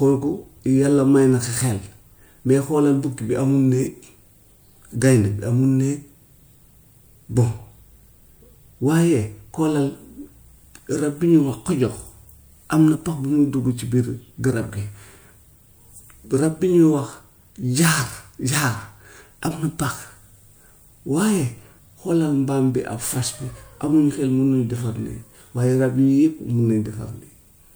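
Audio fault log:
No technical faults can be heard at any point in the speech signal.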